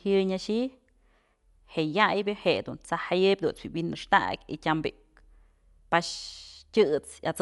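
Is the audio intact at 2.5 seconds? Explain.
No. At 2.5 seconds the speech sounds dull and muffled, with a rough, fluttering noise clinging to its tonal parts, and nothing is heard above about 11.6 kHz. The damage is plainly audible and runs through the whole clip. The likely cause is Dolby Digital compression at a starved bitrate, which fits roughly 64 kbps. The encoder cuts the top of the band and leaves many frequency lines without detail, and the decoder fills those gaps with noise.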